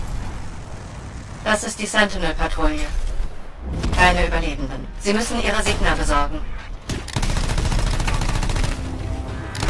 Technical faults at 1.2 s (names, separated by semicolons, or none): none